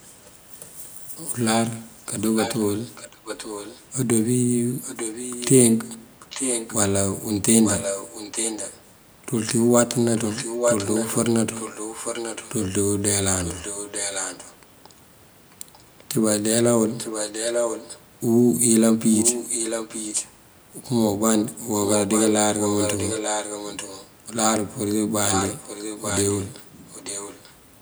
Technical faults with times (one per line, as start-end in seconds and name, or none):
0.02-27.54 echo leak